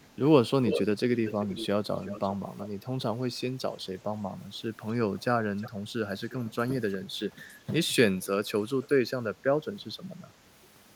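Speech with an echo leak: a delayed copy of the voice, about 0.36 to 0.40 s late, returns at 0–0.16, 0.65–1.66, 2.01–2.66, 4.9–5.24, 5.61–5.7, 6.31–6.53, 6.89–6.94 and 8.81–8.88 s. It is loudest near 1 s and quieter elsewhere. Unlike room reverberation, it is a distinct late repeat rather than a smooth tail, likely from a far-end loudspeaker the echo canceller did not fully remove.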